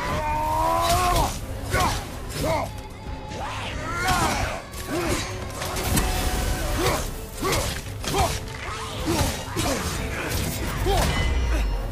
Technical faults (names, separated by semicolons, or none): damaged data in a compressed stream